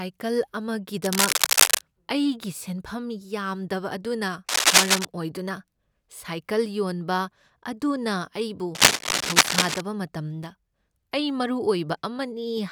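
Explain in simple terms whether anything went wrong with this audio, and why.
Three bursts of cable scratch noise cross the speech at 1.04–1.81 s, 4.49–5.06 s and 8.75–9.81 s. Each is louder than the speech, the middle one most. A worn cable or connector being moved likely caused them, its flickering contact adding scratchy rustling.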